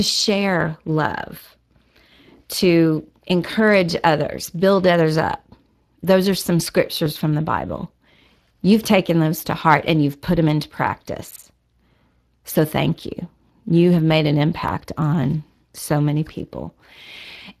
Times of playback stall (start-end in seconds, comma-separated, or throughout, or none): none